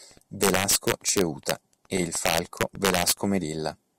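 A gain stage in the signal chain pushed samples roughly 4 dB beyond the largest value its integers could hold, and instead of limiting them it let them wrap around to the opposite sign. This integer overflow runs from 0.43 to 1.51 s, ending just before "e il", and again from 2.26 to 3.12 s, just after "e il". Each loud peak flips across the full range, so the speech breaks into violent cracks far harsher than ordinary clipping.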